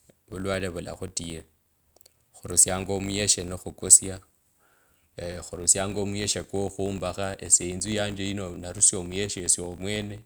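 A speech clip with a 50 Hz buzz running through the whole recording. The fault is a filter restarted on every block. The filter drops its stored state at each block boundary and starts again from silence. Each restart leaves a small transient, and these ticks repeat fifty times a second. That rate fits processing blocks of about 20 ms. The buzz rises and falls with the level of the speech.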